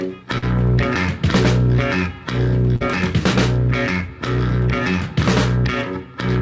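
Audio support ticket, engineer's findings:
Short concealed packet loss at 0.38–0.44 s and 2.76–2.82 s: brief smear in the music, about 40 ms each. Jitter buffer/decoder concealment extended the last signal, then crossfaded back. On a spectrogram: smeared, flattened patch; waveform shows repeated cycles. Band stops at 8 kHz, which fits a wideband call codec such as G.722.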